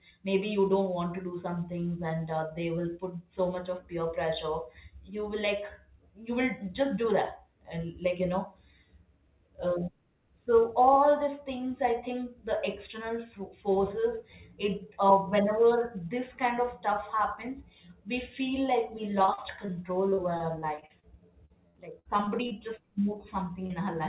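From 19.22 to 19.70 s, 20.10 to 21.05 s and 21.45 to 22.52 s the speech turns choppy and robotic, with pieces dropping out. This is repeated packet loss: short gaps up to about 40 ms, and one of 67 ms, were patched by extending the preceding sound, covering roughly a fifth of each stretch.

At 23.66 to 23.72 s a brief smear passes. This is a short concealed packet loss: about 40 ms of audio arrived too late and was filled by continuing the last sound before blending back. Throughout, nothing above 4 kHz survives the narrowband call path.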